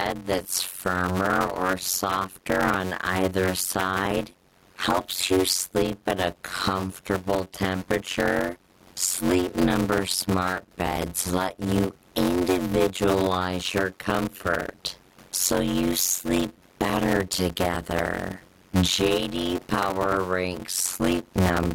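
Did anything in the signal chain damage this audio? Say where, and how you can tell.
Yes. Gain pumping runs through the whole clip: the room background swells between phrases and drops by around 15 dB under each loud syllable. A waveform shows a flattened envelope with a rising noise floor in pauses. The likely cause is input gain set far too high into a fast limiter.

Block size mismatch (padded) at the driver or buffer stage affects the entire clip. A steady 91.9 Hz buzz sits under the speech, which plays at 0.533 times normal speed. This fits 256-sample blocks zero-padded to roughly 480. A spectrogram shows wide vertical silent gaps at regular intervals, nearly half of each block, and a harmonic comb spaced at 91.9 Hz. The room noise, about 41 dB below the speech, is part of the recording.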